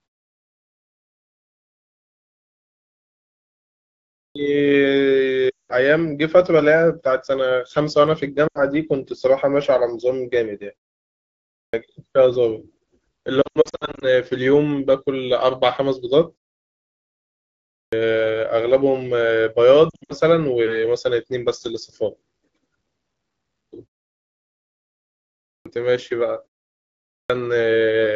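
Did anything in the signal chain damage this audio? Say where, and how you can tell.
Yes. Clipped start after a pause, at the playback device: speech at 3.83, 11.23, 17.34, 25.14 and 26.76 s jumps in abruptly, missing about half a second while the sleeping output wakes.

Lost AMR speech frames, in the radio link: the decoder papers over gaps at 5.49 s (200 ms), 8.47 s (80 ms), 13.42–14.07 s and 19.89–20.13 s, dropping the sound to near silence before it recovers roughly.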